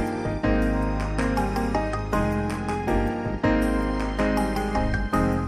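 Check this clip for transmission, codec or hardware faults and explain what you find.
One fault runs throughout: a faint hiss and roughness riding on the sound, growing with louder and brighter passages and vanishing in silence. This is sample clock jitter. The converter's timing wanders by around a microsecond, so steep waveform slopes are misread, leaving error roughly 45 dB down.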